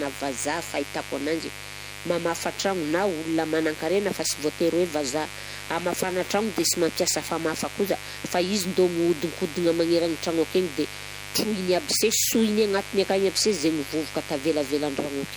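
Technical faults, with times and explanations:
Throughout, mains buzz: a steady, raspy buzz sits under the speech, built on a 50 Hz hum with sharp spikes twice a cycle, so its harmonics climb up into the kilohertz range. It's fairly prominent too, only about 15 dB below the speech, so you can't miss it.
Throughout, MP3 compression: the speech has a watery, swirly quality, with sibilants going chirpy and metallic. That's likely heavy MP3 encoding, sounding like a low bitrate around 64 kbps, where weak frequency lines keep dropping in and out between frames.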